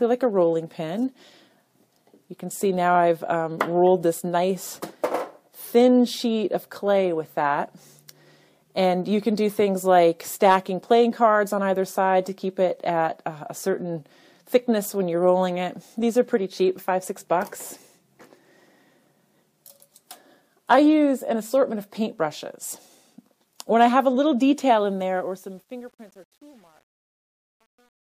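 The closing fade-out turns gritty from 24.71 s, and is worst from 25.36 s to the end at 28.02 s. That is truncation distortion on a fade: the fade stage drops low bits without dither, consistent with roughly 9-bit resolution, leaving square steps.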